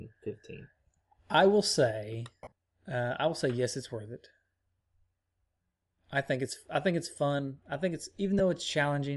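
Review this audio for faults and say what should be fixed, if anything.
Throughout the speech, the upper band has a breathy, grainy edge, likely from Bluetooth LC3 compression at a low rate that fits roughly 48 kbps with 10 ms frames. On a spectrogram, the highs look patchy and noise-filled. Raising the LE Audio bitrate would prevent this.

Lost LE Audio frames at 2.44–2.52 s remove about 70 ms in scattered gaps, the longest around 40 ms, and another 10 ms goes at 8.39 s. The decoder repeats the last spectrum with random signs, so the spectrogram shows smeared noisy columns and the waveform shows fuzzy, dipping patches. A stronger, less congested radio link would prevent this.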